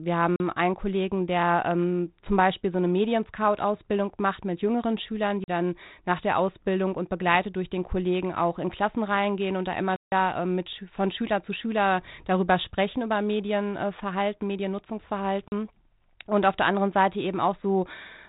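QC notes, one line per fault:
0.36–0.40, 5.44–5.48 (just before "dann nach der"), 15.48–15.52 s: block of digital silence, 40 ms each. The speech drops to silence with hard edges, so you get a short hole, probably from an output buffer missing its deadline.
9.96–10.12 s, right after "reingehen und da": block of digital silence, 160 ms this time, long enough to hear as a hole in the speech. Same abrupt cutout, just a much longer run of empty samples.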